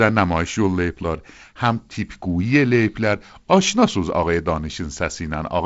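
Speech recording with no technical faults to report.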